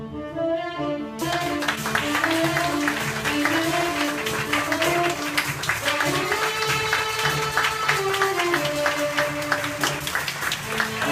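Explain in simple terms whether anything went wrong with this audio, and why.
Two problems can be heard. The first is a skip ahead at 1.21 to 1.23 s. Roughly 0.7 s of audio never gets played, and playback jumps straight from before the missing stretch to after it with no silence in between. This happens when a chunk of audio is lost in transit or thrown away because the receiving buffer was overfull while newer audio was already waiting. The two sides are joined almost directly, so the sound seems to lurch forward.

The second is jitter buffer speed-up, in four places. From 1.60 to 1.78 s the audio plays about 26% fast. From 3.04 to 3.24 s it is about 15% fast. From 4.16 to 5.80 s it is about 7% fast, and from 9.45 to 10.34 s about 5% fast. The receiver had built up more waiting audio than it wanted. To catch up, it repeatedly cut out tiny slices a single vibration cycle or a few long, trimming a small fraction of a second each time. 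The pitch stays the same, but those stretches sound rushed, most clearly in the first one.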